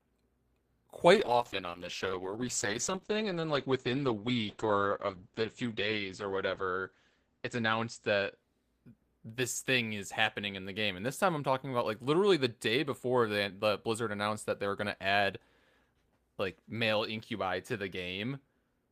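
Speech, with a call bitrate drop from 1.15 s to 9.69 s. The encoder's bitrate falls from about 32 kbps to about 9 kbps, which fits a collapse in the call's bandwidth estimate. At the lower rate the speech is coded more coarsely, and the audio bandwidth shrinks from 20 kHz to 8 kHz, so the top end disappears. The lowest rate holds for about 5.5 s. Quality recovers at 9.69 s, once the bitrate comes back up.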